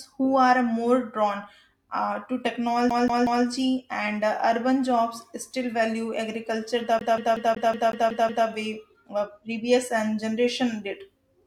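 Speech with two episodes of a CD stuck on one turn. From 2.90 to 3.45 s, the same 185 ms fragment repeats 3 times. From 6.99 to 8.47 s, the same 185 ms fragment repeats 8 times. Each repeat is cut off by a brief mute. The result is the fast, evenly spaced stutter of a skipping disc: a scratch knocks the laser back one track at the same point on every rotation, so the pickup keeps rereading that short stretch.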